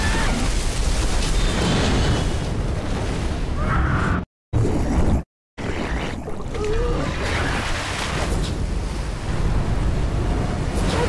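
Nothing here calls for comment, since no technical faults turn up anywhere in this audio.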